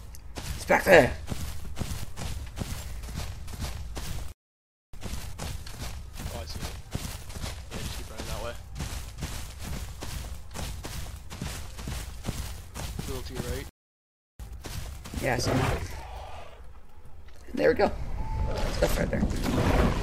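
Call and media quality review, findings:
Playback stall, 4.32–4.94 s and 13.69–14.40 s: likely buffer underrun or blocked player thread; output drops to silence mid-flow for about 0.62 s, then about 0.70 s, before resuming.

Time-compressed catch-up, 4.94–7.82 s at 1.15x and 14.40–17.40 s at 1.1x: player trims backlog after each stall by excising and cross-fading short segments; audio runs hurried at unchanged pitch.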